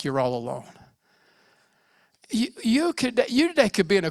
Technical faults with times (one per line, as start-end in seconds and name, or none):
none